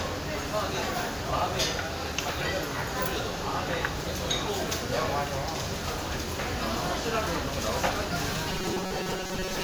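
Right from the start there's a swirly, hollow smear on everything, with transients going soft and nothing above about 20.1 kHz. That's generation loss, most likely from the audio going through a WMA-style codec around four times at something like 128 kbit/s, each pass quantising on a fresh frame grid and stacking up more noise and holes.

From 8.50 s to the end at 9.64 s, the sound turns into a stiff metallic buzz pitched at 188 Hz. That's robotic sound from repeated short buffers. Roughly half the audio is being replaced by loops of about 5.3 ms, the likely cause being late-arriving data, and that loop length sets the buzz pitch.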